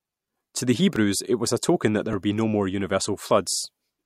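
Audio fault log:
0.96 s and 2.13 s, dropped buffer (overrun): Two brief jumps where the speech skips ahead, just before "it was a token" and between "a token that there" and "would be no more". Roughly 3 ms vanishes each time. The likely cause is samples overwritten before being read, leaving no silence.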